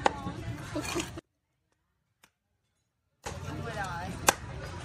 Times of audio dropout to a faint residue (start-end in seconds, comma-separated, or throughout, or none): 1.19-3.26